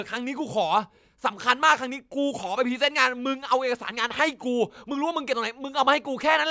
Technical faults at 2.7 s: none

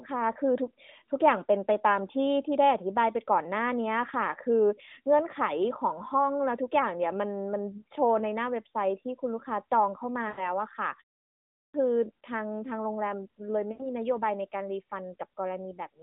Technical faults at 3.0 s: none

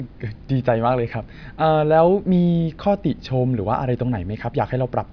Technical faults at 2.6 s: none

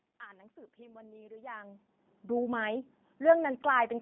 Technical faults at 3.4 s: G.729 codec

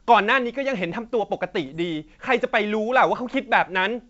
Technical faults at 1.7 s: bit errors on an ADPCM link

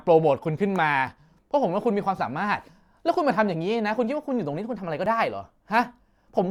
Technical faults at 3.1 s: overlap between stream segments

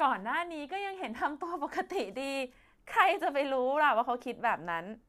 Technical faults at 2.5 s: none

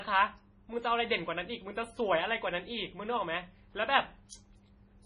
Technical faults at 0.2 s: MP3 compression

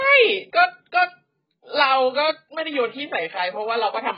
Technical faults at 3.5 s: AAC compression

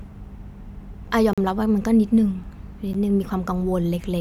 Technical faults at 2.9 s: block of digital silence

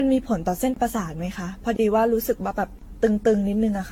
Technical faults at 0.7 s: generation loss; gap between chunks

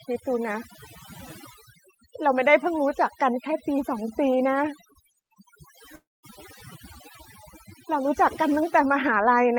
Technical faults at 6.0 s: overdone noise removal; long network dropout

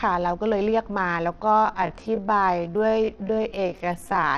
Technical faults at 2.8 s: Bluetooth SBC compression; time-stretched section

